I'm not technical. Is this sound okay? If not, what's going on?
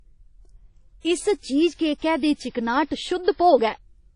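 No. The whole recording sounds ringing and plainly watery, with the crispest treble missing. That is most likely WMA compression, a file-shrinking format pushed too hard.

There are also three pre-echo moments, at 1.74, 1.97 and 2.50 seconds. A short hiss creeps in about a twentieth of a second before a sharp sound, softening its start.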